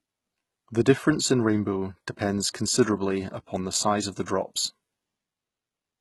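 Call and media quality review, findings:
HE-AAC compression, throughout the speech. Treble present but synthetic: s sounds gritty and lispy, metallic sheen on sibilance, heavy overall damage. Nothing above 11.8 kHz. Likely cause: spectral band replication at a rate that fits about 16 kbps, with upper bands copied from lower ones and misaligned harmonics. Unlike a plain low-pass, the band below the cutoff stays bright, and unlike MP3 swirl, the roughness sits in the treble.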